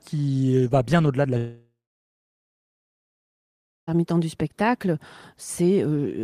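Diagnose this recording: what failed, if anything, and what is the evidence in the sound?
The network stage likely suffered a long network dropout: from 1.37 s to 3.89 s about 2.5 s of speech never arrives. The receiver extends the last sound as a fading buzz for roughly a third of a second, then leaves silence until the audio resumes without the lost part.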